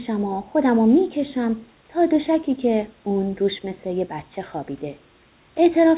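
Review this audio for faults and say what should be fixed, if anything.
Nothing here needs fixing; the speech comes over the call line as a narrowband phone connection would carry it, with the quiet room noise sitting well beneath it, about 38 dB down.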